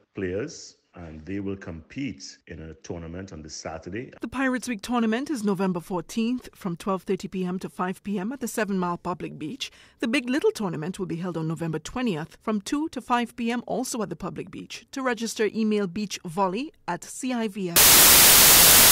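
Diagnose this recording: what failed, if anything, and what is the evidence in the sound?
A wrong sample width fault in sample-format conversion takes over from 17.76 s to the end at 18.92 s. The speech drops to loud noise with the original buried in it, at half speed and an octave down. Unlike a byte-order swap, it slows and lowers the sound, consistent with 32-bit data read as 16-bit.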